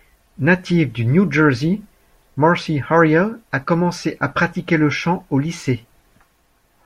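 No dropouts, clipping, glitches or other transmission or capture faults can be heard anywhere in this speech recording.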